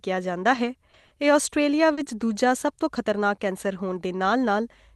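Speech, carried over an Opus call link whose sound stops at about 12 kHz. From 0.55 to 2.07 s there is repeated packet loss, giving a robotic sound. Five short holes open in the audio, the longest 40 ms. Each is filled by stretching the last good sound forward, so about 140 ms is concealed, roughly a tenth of that stretch. The speech turns choppy, with small pieces missing. At 2.67 s one lost packet is rebuilt from error correction. The next packet held a low-quality copy, so no gap appears. That 20 ms moment sounds rougher and noisier than its surroundings.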